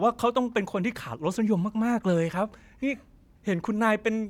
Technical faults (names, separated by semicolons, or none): none